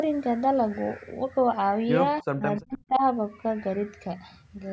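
Speech suppressed in double talk occurs from 2.21 to 2.44 s and again from 2.6 to 3.03 s. The speech falls away sharply, by about 40 dB in the first stretch and about 35 dB in the second, so it nearly vanishes in pieces for around a fifth of a second and then around 0.4 s. The likely cause is an echo canceller that, with both sides talking at once, could not separate this talker from loudspeaker echo and turned both down.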